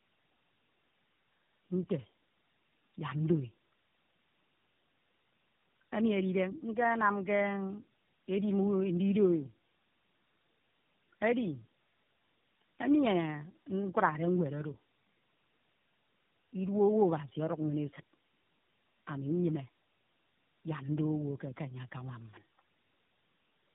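Speech runs through the whole clip with tandem speech coding: it sounds rough, muffled and warbly, with nothing above 3.8 kHz. The stacked artefacts, worse than any single low-rate narrowband codec produces, fit three different speech codecs in a row, each re-coding the previous one's damaged output.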